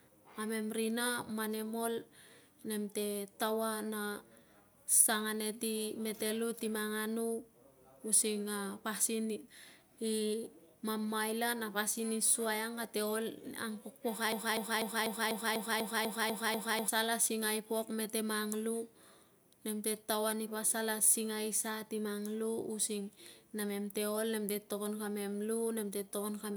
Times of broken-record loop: 14.32-16.88

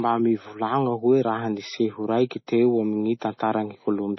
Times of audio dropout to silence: none

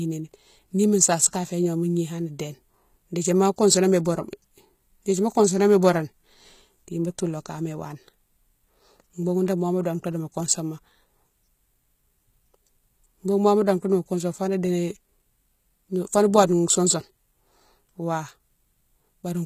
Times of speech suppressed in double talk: none

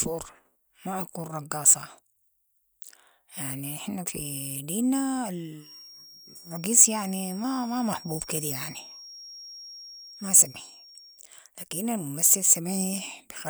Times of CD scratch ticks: none

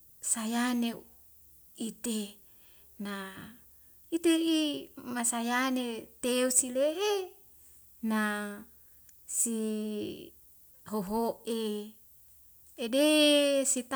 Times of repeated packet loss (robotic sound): none

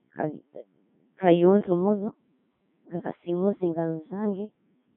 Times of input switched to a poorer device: none

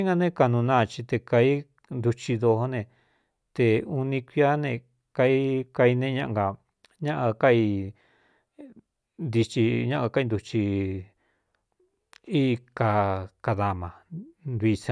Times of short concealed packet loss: none

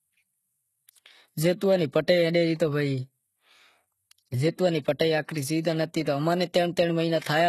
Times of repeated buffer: none

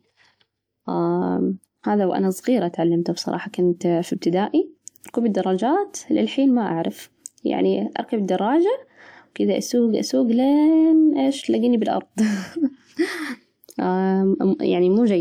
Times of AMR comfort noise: none

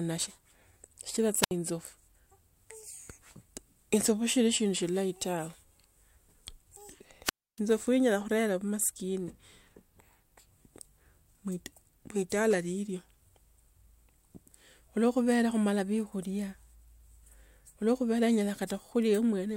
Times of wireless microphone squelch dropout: 1.41-1.51, 7.24-7.60

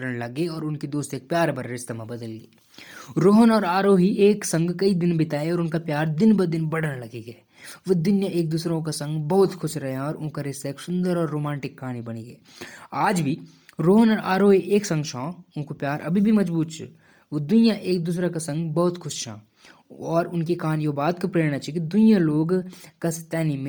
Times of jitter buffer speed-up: none

